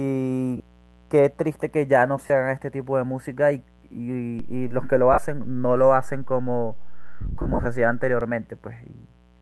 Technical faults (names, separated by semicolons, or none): mains buzz; lost LE Audio frames; DC step